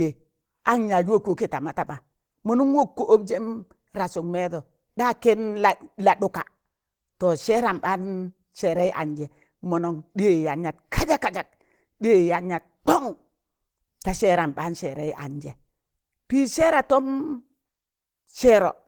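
A speech recording with plainly audible Opus compression from start to finish: the sound is hoarse and grainy, with tonal parts turned rough and noisy. The likely cause is the codec's hybrid speech mode at a low rate, consistent with about 16 kbps, though content still reaches roughly 20.2 kHz.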